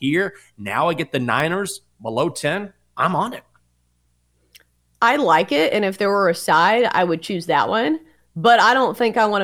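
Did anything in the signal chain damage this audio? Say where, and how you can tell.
Yes. At 1.40 s, just after "now I get the", a single sharp snap sits on top of the speech, lasting only a few milliseconds and peaking fairly strongly, somewhere near -15 dBFS. It is abrupt and broadband, unrelated to the speech around it, and does not repeat. This is most likely an electrical switching spike picked up in the analogue wiring: a nearby switch, motor or static discharge arced briefly, and the cable carried that burst into the recording.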